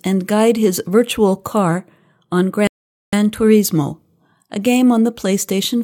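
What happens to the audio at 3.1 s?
At 3.1 s the speech is just coming back after a sudden drop to silence that began at 2.67 s. It picks up exactly where it stopped at 3.13 s. This is a rebuffering stall: playback ran dry of downloaded audio and paused about 0.46 s, adding time without losing any sound.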